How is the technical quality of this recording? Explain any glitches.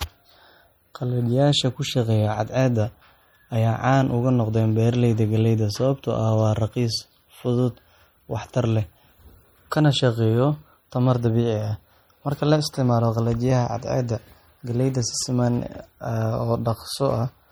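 The speech carries plainly audible codec damage from start to finish, most likely MP3 compression. The high detail has a watery, swirling quality, with metallic chirps on s sounds and softened consonant attacks. The encoder appears to be starving for bits, which fits a low bitrate around 48 kbps, so it discards quiet frequency components. Those components flicker on and off between frames, producing the shimmer. A plain low-pass filter would dull the top end just as much but leave it steady and smooth; that frame-to-frame warbling is what identifies a lossy codec.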